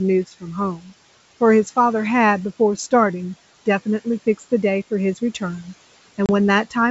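From 0.27 to 0.44 s the speech turns faint and swallowed, dipping by about 14 dB across roughly a tenth of a second in all. This is speech cut by the noise suppressor, which mistook quiet stretches of speech for background and turned them down with it.

At 6.26 to 6.30 s a hard-edged 30 ms hole opens, and the speech resumes slightly off before settling. This is packet loss on an ADPCM call. A few packets were replaced by silence, knocking the decoder's predictor and step size out of step with the sender's.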